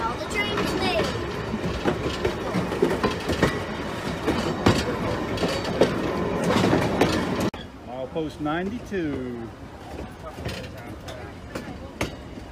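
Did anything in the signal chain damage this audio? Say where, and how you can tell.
Yes. Regular clicks occur at a steady 2.52 s interval, from 2.61 s to 10.17 s. This is likely clock drift buffer slips at the driver or buffer stage. Two clocks disagree by roughly 150 ppm, so a small block of samples is dropped or repeated.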